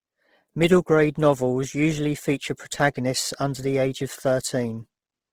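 The speech has likely been through Opus compression in its CELT mode throughout, at a rate that sounds like about 16 kbps. Band energies are kept across the full bandwidth, but starved bands get filled with noise, so the voice sounds plainly grainy and rough.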